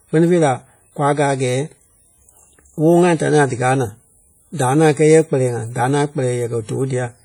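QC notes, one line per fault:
throughout: WMA compression. Speech rings and sounds washy, with hiss that breathes alongside it. Heavy quantisation noise smeared across long transform blocks points to around 32 kbps, likely WMA.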